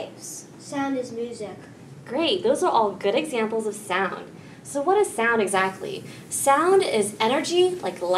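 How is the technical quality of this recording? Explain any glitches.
The recording has one fault. From 5.47 s to the end, pre-emphasis is left on: treble boosted for transmission was never cut back. It sits about 10 dB hot at 10 kHz, fitting a 50 µs FM curve, and sounds thin, bright and sibilant. Unlike a fixed treble shelf, it rises steadily with frequency.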